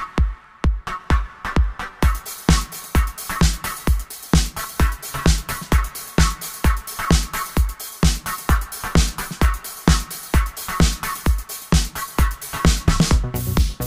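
A regular click recurs every 0.6 s from 0.44 s to 13.65 s, about twenty in all, each where a small block of roughly fifteen samples is dropped or repeated. This pattern points to clock drift buffer slips, likely caused by two devices running on independent clocks that disagree by something like 700 ppm, so the buffer between them slowly fills or drains until it has to jump, producing a steady tick under the sound.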